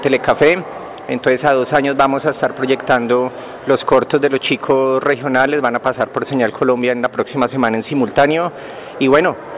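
No technical faults are audible.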